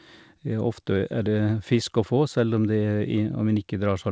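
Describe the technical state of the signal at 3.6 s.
At 3.6 s the speech comes through intact, with no dropout, glitch or distortion, only the expected band limit of the call path, which leaves nothing above 8 kHz.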